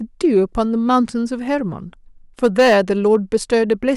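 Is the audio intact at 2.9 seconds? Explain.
No. From 2.44 to 3.90 s the speech suffers hard clipping: driven about 6 dB past what the stage can pass, its peaks are sliced flat, adding high harmonics heard as crackle on peaks. The abrupt flat tops make it grittier than rounded soft saturation.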